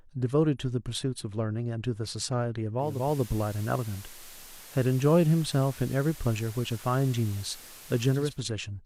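A steady hiss rises under the speech at 2.76 s, fading in over about 0.37 s, and the level shifts by about 1 dB. The hiss sits roughly 20 dB below the speech until 8.43 s, when the cleaner sound returns. This is digital radio blending to analogue: the receiver lost its digital stream and cross-faded to the station's FM broadcast, whose background noise carries the hiss, then blended back once the digital signal recovered.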